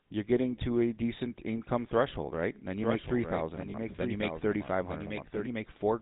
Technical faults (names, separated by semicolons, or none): GSM full-rate codec; lost GSM frames